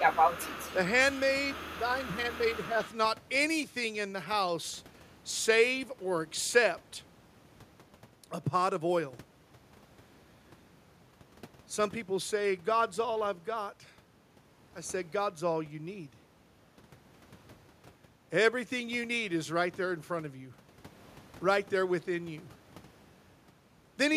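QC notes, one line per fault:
0.00–0.75 s, 1.12–1.21 s, 1.48–1.81 s, 2.03–2.12 s, 2.31–2.38 s, 2.83–2.96 s: echo leak. A faint delayed copy of the far-end speech trails it by 222 ms, roughly 15 dB below the speech in the first stretch and nearer 20 dB below in the later scraps. It comes through in short pieces rather than continuously. The likely cause is an echo canceller on a loudspeaker endpoint that is not fully removing what its microphone picks up, so residual playback is returned down the line.
1.89–2.46 s, 2.67–2.80 s: speech suppressed in double talk. The local speech drops in level by up to about 5 dB, for roughly 300 ms in the first span and 150 ms in the second, overlapping the echo bursts at 2.03 s and 2.31 s. With both ends active, the canceller likely could not separate the near talker from the returning echo and attenuated both, which gives these short dips.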